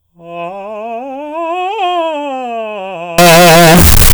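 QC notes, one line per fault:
3.18 to 4.14 s, float read as integer: for the final stretch of the music the level jumps to a harsh, blaring, almost square-edged wall of sound sitting at an almost fixed, high level, with the quiet background lifted to match the foreground, though the pitch can still be followed. The likely cause is 32-bit float samples being interpreted as 32-bit integers, so each value's sign and exponent bits, rather than its true amplitude, set the output level.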